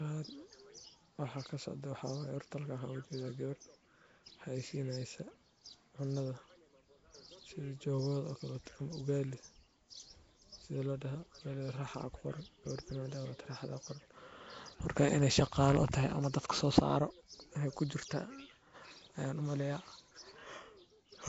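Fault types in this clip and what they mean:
Nellymoser compression: throughout, the speech sounds rough, hissy and smeared, with nothing above 7.7 kHz, likely from coarse fixed-rate block coding that fills weak bands with noise.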